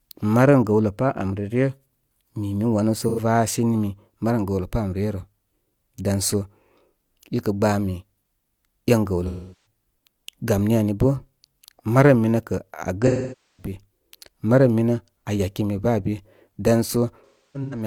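AAC frame loss with concealment: lost frames were rebuilt from the last good spectrum. At 3.02 s an 85 ms loss sounds like a brief smeared, noisy patch. At 9.27 s (384 ms) and 13.06 s (512 ms) the speech decays toward silence and fades back in. From 17.25 s to the end, losses scattered over 0.47 s, the longest about 0.3 s, leave a faded, broken-up ending.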